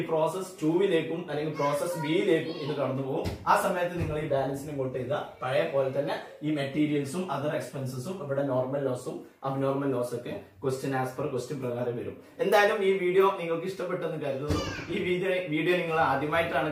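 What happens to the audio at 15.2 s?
Nothing goes wrong at 15.2 s; the audio plays through that moment intact, with no dropout, click or other fault.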